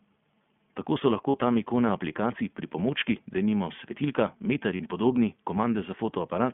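iLBC codec damage runs through all the speech: nothing passes below 150 Hz or above 3.4 kHz, and framewise coding of the excitation leaves the speech plainly rough and synthetic, in a way that fits the 15.2 kbps mode.

Lost iLBC frames at 1.30–1.37 s, just before "tam ikone aplikacij pripomočki", and at 4.76–4.82 s, between "pripomočki denimo svetilka meter" and "in podobni": each time 40 ms of audio vanished and the decoder repeated the last pitch cycle with noise, giving a brief buzzy held vowel before clean recovery.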